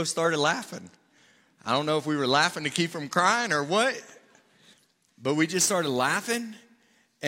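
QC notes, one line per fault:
5.53 to 7.27 s, sample clock jitter: the speech picks up a grainy hiss and roughness that rides on the voice, heaviest on loud and bright, sibilant sounds and falling away in the pauses, with the error sitting roughly 20 dB below the signal. The converter's clock wanders by a few microseconds, so each sample is taken slightly early or late; where the waveform changes steeply, that timing slip becomes a large amplitude error, heard as noise that tracks the signal.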